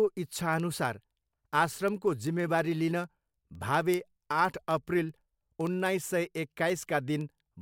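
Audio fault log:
0.15 to 7.60 s, word clock ticks: the receiving device runs on its own clock, roughly 400 ppm off the sender's, so one sample is dropped or repeated each time the clocks slip. The speech carries sharp ticks of uneven strength about every 0.07 s, around a hundred in all.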